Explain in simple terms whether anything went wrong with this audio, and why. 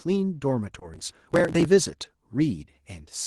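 Two things went wrong in this speech recording.

The first is short concealed packet loss, at about 0.79 to 0.83 s. A small piece of the call, about 20 milliseconds, didn't arrive in time to be played. The receiving end filled that gap by stretching out the sound that came just before it and then blending back into the real audio. You hear this as a brief smear or wobble, and a very short sound at that moment could be lost entirely.

The second is processor overload crackle, from about 0.94 to 1.65 s. The computer handling the audio was too busy to prepare each tiny chunk of sound on time. The chunks were around ten milliseconds each, and dozens of them missed their deadline over that stretch. Each missed chunk was simply skipped, which left a tiny gap with a sharp edge. Strung together, those gaps sound like a gritty crackling over the speech for most of a second, until the load eased and it stopped.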